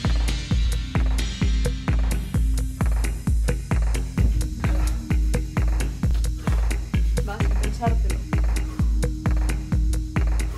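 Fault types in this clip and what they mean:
Damaged data in a compressed stream: at about 6.11 s a chunk of the coded stream is corrupt, so the decoder can't make sense of those frames, loses its footing and hunts for the next valid header. You hear it as a brief blip right there.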